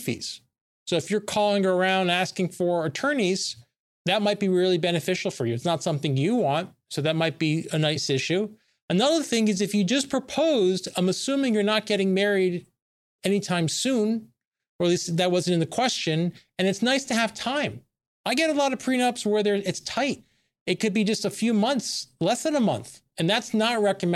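No technical faults can be heard anywhere in the speech recording, with the signal holding steady and intact throughout.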